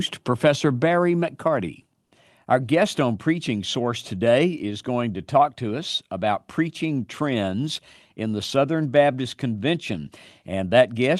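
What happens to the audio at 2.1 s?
From 2.01 to 2.11 s, a 100 ms stretch of background is replaced by comfort noise. The real background sits about 52 dB below the loudest speech. Here its detail gives way to a steady, featureless noise, about 3 dB quieter. The likely cause is discontinuous transmission in the Opus codec. The sender stops sending audio during the pause. The receiver fills the gap with synthetic noise shaped roughly like the background.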